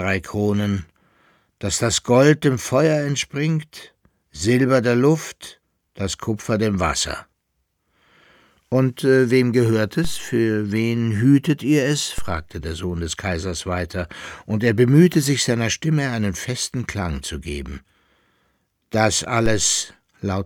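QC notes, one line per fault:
10.05 s, 12.18 s and 19.46 s: DC step. The waveform's zero line suddenly jumps by about -16 dBFS (about -14 dBFS on the last), giving a low thump each time. The offset then drains away through a 2 Hz high-pass while the sound carries on untouched.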